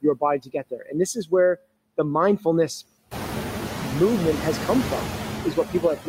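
Noise suppressor artifacts run through the whole speech clip, but only lightly. The suppressor is taking just about 3 dB off whatever it reads as steady noise. So the background dips and lifts a little with the speech rather than vanishing.

Speech cut by the noise suppressor shows up early, between 0.4 and 0.94 s. Soft parts of the speech get mistaken for noise and pulled down by up to about 13 dB, roughly a third of a second in total, so they sound swallowed. It happens again from 1.14 to 1.32 s, a short dip of up to about 14 dB. The last and deepest one comes at 5.55 to 6.07 s, dropping up to about 16 dB over around 150 ms, after the room noise has come up. That noise rises by about 15 dB near 3 s and sits only about 9 dB under the speech.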